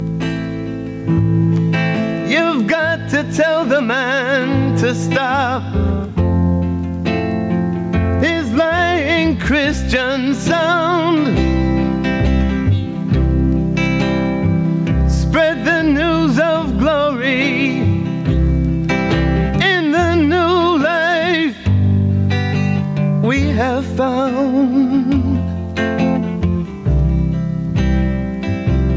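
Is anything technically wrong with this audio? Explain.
Yes. Gain pumping runs through the whole clip. The likely cause is input gain set far too high for the microphone, with a fast limiter or compressor clamping down hard whenever a loud sound arrives and releasing straight after. The gain swings by roughly 15 dB, so loud and quiet passages sit squashed together at a similar level. The call's microphone processing, which limits the band to about 8 kHz, sits alongside this.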